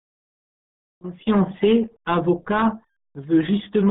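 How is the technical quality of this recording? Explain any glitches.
Poor. The speech is narrow, muffled and smeared for the whole clip. The cause is the RealAudio 14.4 codec, present from start to end. It was built for dial-up modems and squeezes speech into a tiny data stream. The damage here is heavy and fits a rate of about 8 kbit/s. Only a phone-like band of about 150 Hz to 3.5 kHz survives. Nothing above 3.8 kHz remains. Consonants lose their edge, and the voice sounds gargly and boxed in.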